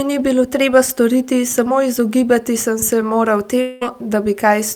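From 3.61 to 3.83 s the speech turns into a fading, buzzy hiss that stretches out the last sound: a long network dropout. About 200 ms of audio likely never arrived. The gap is filled throughout rather than dropping to silence, and unlike a brief packet-loss blip, the speech resumes with that stretch gone.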